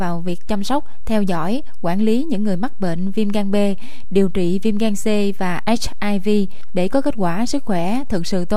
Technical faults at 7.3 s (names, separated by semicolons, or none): DC offset